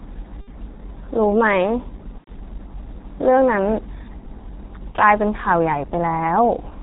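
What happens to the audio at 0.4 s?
From 0.41 to 0.49 s the speech stops sounding like a voice and stretches into a buzzy tone or a coloured noise that fades in level, and it stays thin and distorted for a short while after the signal returns. This is VoIP packet loss concealed by the speech codec. About 60 ms of audio went missing, which fits two lost 30 ms frames. The decoder filled the gap by repeating its last pitch and vocal-tract filter while lowering the gain each frame. Because every frame depends on the one before, recovery lags behind the point where real data resumes.

Underneath, the whole passage carries heavy G.723.1 codec damage. The speech is muffled with nothing above 4 kHz, has a hoarse, rough texture, and its consonants are blurred. This fits a bitrate around 6.3 kbit/s. With 30 ms frames and a slowly updating voice model, the codec cannot follow quick changes in the speech, and that smears the fine detail.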